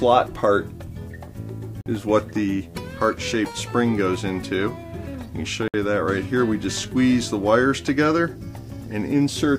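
The audio drops abruptly to silence twice: from 1.81 to 1.86 s, a gap of 48 ms, and from 5.68 to 5.74 s, a gap of 61 ms, with playback picking up again after each. These are Bluetooth stalls, likely caused by radio interference delaying packets so that the headphones' buffer emptied and output paused until the retransmitted data arrived.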